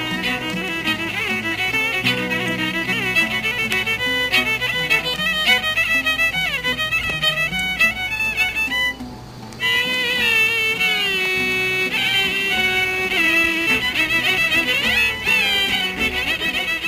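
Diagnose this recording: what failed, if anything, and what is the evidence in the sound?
Electrical interference reached the analogue wiring, likely arcing from a nearby switch or motor, leaving three electrical switching spikes. Each is a sharp snap laid over the sound, at 3.72 s, 7.10 s and 11.25 s. The first peaks around -5 dBFS, and the later two are quieter.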